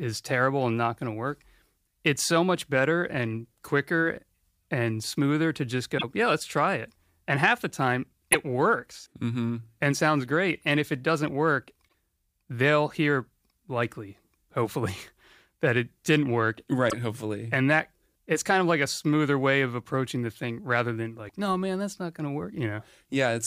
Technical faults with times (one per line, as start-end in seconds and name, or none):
5.94-6.04 damaged data in a compressed stream
8.30-8.35 damaged data in a compressed stream
11.85-11.92 damaged data in a compressed stream
16.86-16.94 damaged data in a compressed stream
21.25-21.30 damaged data in a compressed stream